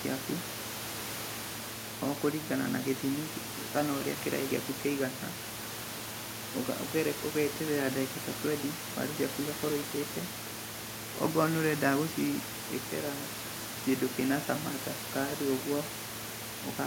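There are no technical faults to describe at any point in this speech clip.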